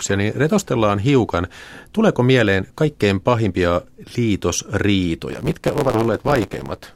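From 5.29 s to the end of the clip, the speech shows a block size mismatch (truncated). One stage hands on blocks longer than the next stage accepts, so the tail of each block is discarded. That regular cut produces a buzz at about 109 Hz, which fits a 512-sample write block, and the speech runs about 1.16 times faster while keeping its timbre. A plain speed or sample-rate error would raise the pitch along with the pace, and random dropouts would not buzz at a steady rate.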